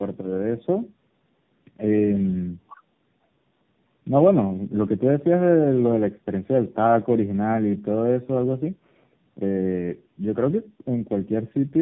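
From start to end the call passes through tandem speech coding: it is decoded and re-encoded at each network border, and the sound points to three speech coders in a row, such as narrowband mobile coding at both ends with a Bluetooth-style link between them. Each stage compresses the previous stage's damage. The speech comes out rough, muffled and warbly, with nothing above 3.8 kHz.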